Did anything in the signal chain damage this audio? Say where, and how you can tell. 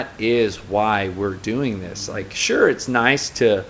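No, nothing in the signal chain damaged this audio.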